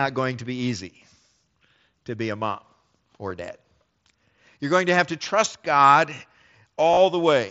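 At 3.30 s a single concealed Bluetooth headset packet loss is nearly hidden. From 6.91 to 6.97 s, losses scattered over about 60 ms, with a 30 ms run, are filled by repeating the best-matching recent waveform. That yields a buzzy held tone and a warble on recovery rather than a silent gap, over mSBC's 8 kHz-limited band.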